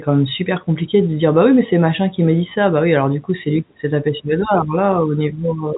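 No technical faults can be heard in this speech.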